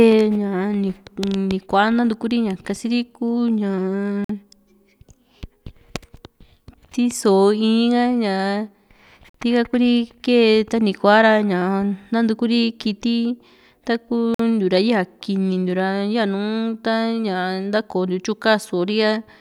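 Speech clip with a gap between chunks: clean 50 ms holes at 4.24, 9.29 and 14.34 s, every 5 s, where silence was left at the joins between 5 s chunks.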